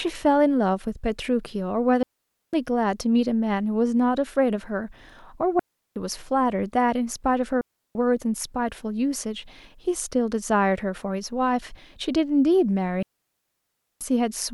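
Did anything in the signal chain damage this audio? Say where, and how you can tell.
Yes: clean, noise-free gaps at 2.03, 5.59, 7.61 and 13.03 s, lasting 0.34–0.98 s, are digital wireless dropouts, where the receiver mutes after losing link data.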